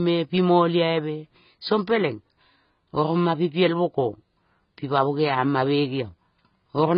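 The speech has likely been through heavy AAC compression across the whole clip. The encoder appears to have been starved of bits, which fits a bitrate near 16 kbps, so it dropped everything above about 5.1 kHz and quantised the remaining frequency lines coarsely. The speech sounds dull and muffled, with the upper band simply gone, and sibilants and sustained sounds take on a smeared, warbling, fizzy texture where parts of the spectrum have been thinned out or patched.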